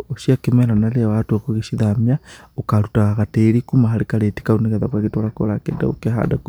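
Nothing goes wrong anywhere in this bit of speech, so there's no fault to point to at any moment.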